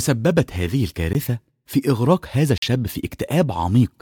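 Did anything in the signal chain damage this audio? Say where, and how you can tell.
Yes. Two blocks of digital silence, at 1.13 s and at 2.58 to 2.62 s (about 46 ms, fitting a 2048-sample buffer), point to a buffer underrun; the abrupt edges rule out a fade or concealed dropout.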